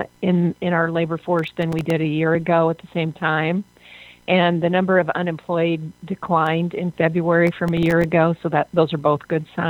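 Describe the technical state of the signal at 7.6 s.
At 7.6 s the signal is inside a burst of processor overload crackle running from 7.47 to 8.04 s. Very short buffers, around a millisecond and a half each, repeatedly miss their deadline and fall silent, leaving hard-edged gaps heard as gritty tearing. The waveform shows tiny notches dropping to near silence, and the spectrogram shows thin vertical broadband streaks.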